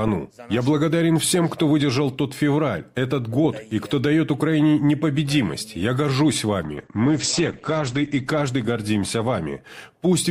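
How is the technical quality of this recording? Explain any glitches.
Quality drops audibly near the end. Call bitrate drop from 6.63 s onward: the encoder, given far fewer bits, codes coarsely and cuts the top end at 8 kHz, leaving rough, muffled sound, which fits a fall from 96 to about 10 kbps.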